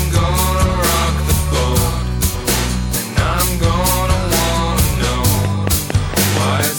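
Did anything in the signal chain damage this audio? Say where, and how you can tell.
Yes. At 2.33 s the compressed stream carried damaged data: bytes in one stretch of the file were lost or overwritten, so the decoder misread those frames, lost sync and had to hunt for the next valid frame header before the music could resume. What you hear is a brief chirp or squawk lasting only a moment, a foreign blip that belongs to the codec or storage stage rather than to the recording itself.

From 5.45 s to 6.61 s there is a train of clicks: about seven near-identical pops at a steady 4.34 per second, sitting well above the music, roughly 15 dB over it. Their matching shape and regular spacing point to something outside the performance injecting pulses, likely interference picked up in the analogue wiring or a faulty connection or power supply. The result is an even ticking laid over the last second of the music.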